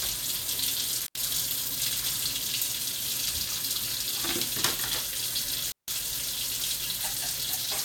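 A recording of everyday sounds with intermittent contact twice, at 1.00–1.21 s (dropout about 86 ms) and 5.70–5.88 s (about 159 ms): a loose connector opens, cutting the signal to faint hiss with crackle at each edge.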